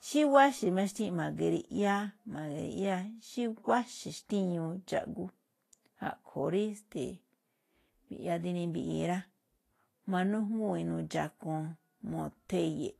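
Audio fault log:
throughout Vorbis compression: hissy, grainy speech with nothing above 14.2 kHz; likely Vorbis near 32 kbps, treble coarsely quantised into noise rather than simply filtered away.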